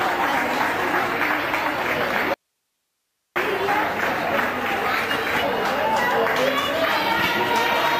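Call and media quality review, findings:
Audio dropout to a faint residue, 2.34–3.36 s, about 1.02 s lost. Abrupt cut, only low hiss remains, roughly 55 dB under signal. Likely upstream feed loss with downstream path still live. Waveform: sudden near-flat band; spectrogram: broadband noise floor, no structure.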